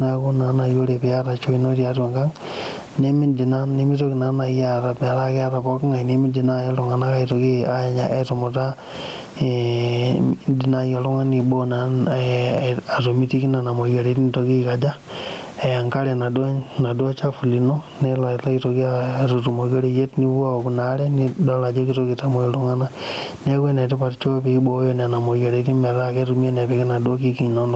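Throughout the speech, the input gain is likely set far too high, so a fast limiter clamps down on each loud burst and lets go in the pauses. This gain pumping swings around 15 dB, squashing the speech.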